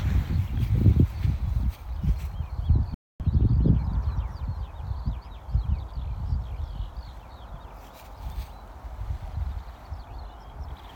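A corrupt frame muted fault cuts the audio to silence abruptly at 2.94 s, and it stays silent until 3.20 s. The decoder rejected bit-damaged compressed frames and the player filled the gap with silence. The 0.26 s hole fits about four frames, and timing continues unshifted.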